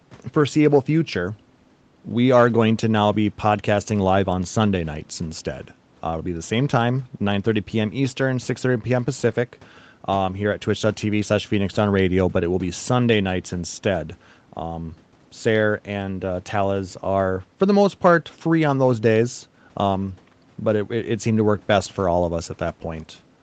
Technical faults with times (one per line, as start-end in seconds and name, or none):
none